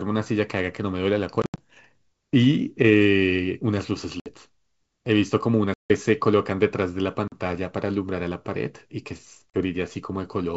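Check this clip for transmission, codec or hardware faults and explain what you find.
Five sharp dropouts break up the speech, a sign of packet loss on an ADPCM call. The holes fall at 1.42–1.60 s (120 ms missing, scattered over 160 ms, the longest gap 80 ms), 4.20–4.34 s (60 ms), 5.74–5.91 s (160 ms), 7.28–7.34 s (40 ms) and 9.50–9.62 s (40 ms). Each cuts abruptly to silence, and the speech re-enters slightly distorted before steadying within tens of milliseconds. A few packets to around seven go missing per event, and the silence fills the gap. ADPCM sends only differences from a running prediction, so the receiving decoder's predictor and step size drift from the sender's and must re-converge. The G.722 wideband coding carrying the call keeps speech clear up to about 7 kHz, with a light hiss in the upper band.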